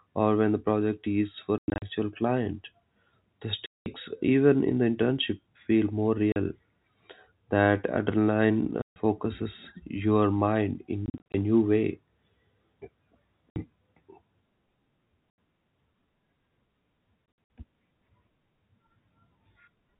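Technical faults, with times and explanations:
1.58–1.82, 3.66–3.86, 6.32–6.36, 8.82–8.96, 11.06–11.34, 13.50–13.56, 15.30, 17.26–17.50 s: packet loss filled with silence. Dropouts of 40–200 ms, in steps that fit 20 ms packets, leave hard-edged gaps in the speech.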